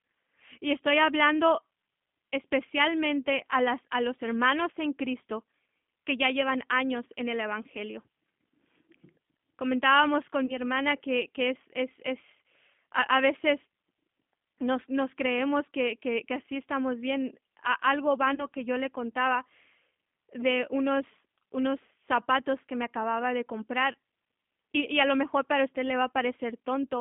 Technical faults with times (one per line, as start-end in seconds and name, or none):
0.00-27.01 G.729 codec
10.46-10.55 VoIP packet loss concealed by the speech codec
18.35-18.49 VoIP packet loss concealed by the speech codec